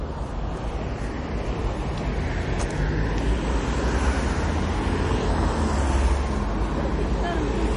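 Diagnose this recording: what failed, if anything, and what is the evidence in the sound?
The failure sits at the codec stage, and the likely cause is MP3 compression at a starved bitrate. Throughout the clip the treble stops dead at about 10.6 kHz. The damage is plainly audible. Weak detail has a watery, swirling quality as it drops in and out between frames. Sharp onsets sound smeared. The encoder ran short of bits, so it cut the top band and discarded quiet components. That fits a rate near 36 kbps.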